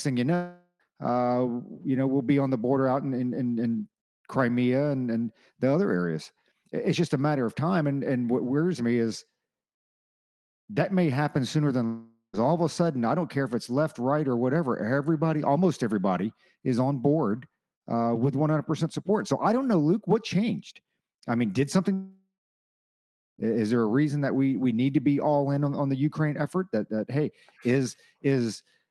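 Long network dropouts at 0.35 to 0.82 s, 11.86 to 12.35 s and 21.93 to 23.40 s: the sound smears into a fading buzz, then silence (about 1 s in the last), likely from lost packets, resuming with a gap.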